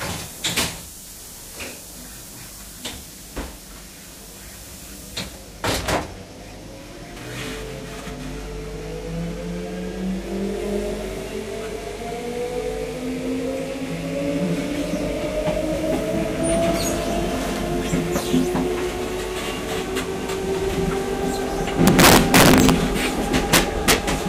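Integer overflow strikes from 21.87 to 22.70 s and again from 23.54 to 23.93 s. The signal was pushed about 8 dB, then about 4 dB, past full scale, and peaks wrapped to the opposite sign instead of limiting, producing harsh, violent cracks far sharper than clipping.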